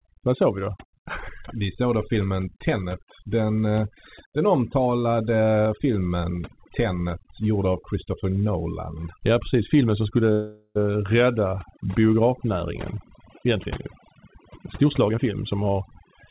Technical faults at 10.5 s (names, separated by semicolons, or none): overdone noise removal; call audio freeze